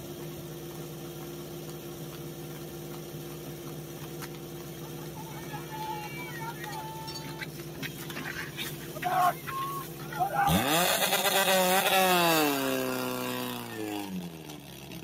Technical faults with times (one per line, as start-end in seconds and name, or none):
0.00-15.04 noise suppressor applied to music or sounds